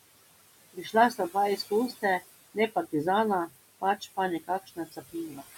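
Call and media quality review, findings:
Noise suppressor artifacts throughout: room noise, about 16 dB below speech, pushed down about 19 dB between phrases and swelling under speech. Spectrogram shows a flickering, gated noise floor.

Speech cut by the noise suppressor at 0.73–0.94 s, 3.8–4.18 s, and 4.4 s to the end. Drops of about 18, 21 and 16 dB leave faint, swallowed syllables, visible as notched waveform envelope.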